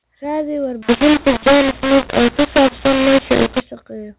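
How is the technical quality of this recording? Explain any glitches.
The speech is telephone-band throughout, with nothing above 4 kHz, and a stretch in the middle is badly distorted.

From 0.82 to 3.61 s the speech turns harsh and gritty. Loud parts break up, softer parts jump unevenly in level, and the gaps between syllables fill with a noisy hiss instead of falling quiet. The cause is a mu-law and A-law mix-up: audio encoded with G.711 A-law was decoded as mu-law. Each 8-bit code is mapped onto the wrong logarithmic curve. Amplitudes are scrambled, and near-silent samples are pushed well above zero.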